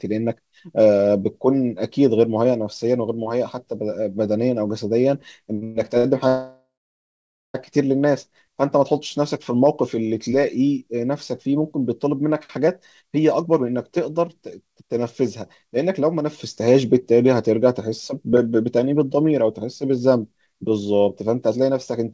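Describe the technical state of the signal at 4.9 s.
At 4.9 s the speech is intact, with no dropout, click or distortion, only the band limit of the call path, which leaves nothing above 8 kHz.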